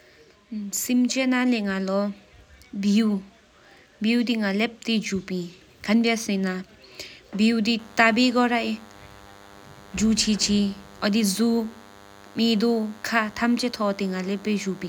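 A nearby DECT cordless phone or base station, transmitting a short radio burst 100 times a second, is being rectified by the audio circuitry from 7.79 s to the end. The result is DECT cordless phone buzz: a steady, thin 100 Hz buzz, rich in harmonics, sitting well below the speech.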